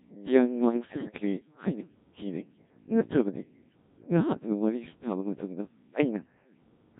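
From start to finish the speech sounds robotic and buzzy, with a synthetic timbre. This is the Codec 2 vocoder at work. Rather than preserving the waveform, the encoder transmits only pitch, voicing, energy and a coarse spectral envelope, and the decoder rebuilds the voice from summed sine waves. The damage here is heavy, consistent with one of the lowest Codec 2 modes, around 1.3 kbit/s.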